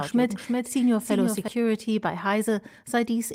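Doubled audio track, from the start to 1.48 s: a second full-band copy trails roughly 0.4 s behind at about 5 dB lower, likely from a slower capture path, then cuts off abruptly.

Lost packet rebuilt from error correction, 2.01 to 2.03 s: a 20 ms stretch, which fits a single lost packet, sounds rougher and noisier because it was rebuilt from a low-bitrate backup copy.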